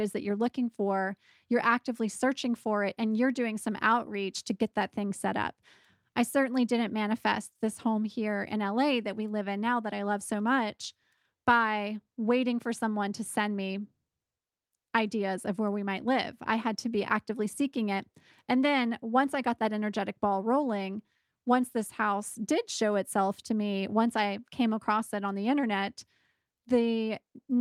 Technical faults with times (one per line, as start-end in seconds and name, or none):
none